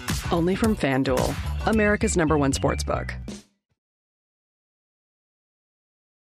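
Nothing's wrong with this audio; the level simply eases down in a smooth fade-out that starts around two and a half seconds in and finishes at 3.8 s, with no click or hard edge at the end.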